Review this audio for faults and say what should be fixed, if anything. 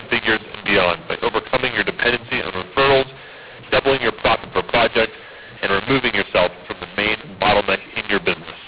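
A mu-law and A-law mix-up runs through the whole clip: speech encoded with G.711 mu-law is decoded as A-law. The two logarithmic curves map the same 8-bit codes to different levels, so the speech turns harsh and distorted, and near-silent samples are lifted, filling pauses with noise.

To prevent it, carry the companding law with the stream or set it identically at both ends, so the decoder always uses the same law as the encoder.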